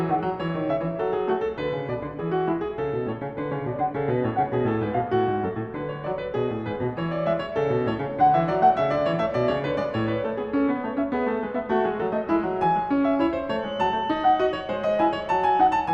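Near the end the system likely let the path from loudspeaker to microphone settle right at the edge of feedback, so a single frequency kept recirculating without building into a howl. From 13.55 s to 15.94 s, a feedback whistle at 3 kHz sits behind the music, thin and steady in pitch, swelling and fading slowly in level. It stays well below the music, roughly 25 dB down, so it is a faint whine rather than a dominant squeal.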